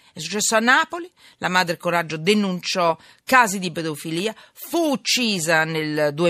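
No dropouts, clicks, distortion, level jumps or timing errors turn up anywhere in the speech.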